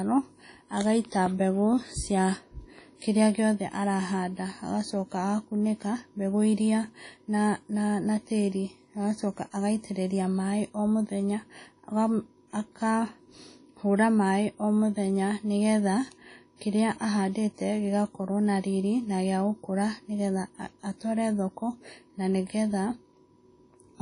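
Speech here, and it has WMA compression damage from start to finish: a ringing, washy quality with hiss that swells and fades with the voice, and nothing at all above 10.1 kHz. That's likely a low-bitrate WMA encode, and the damage fits something around 32 kbps.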